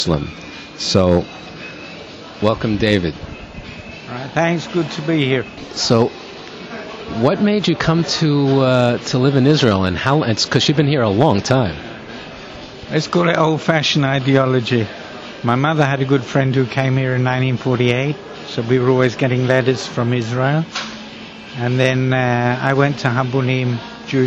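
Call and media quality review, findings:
Nothing to flag here: no dropouts, glitches or level problems turned up anywhere in the audio, so no ticket items are needed.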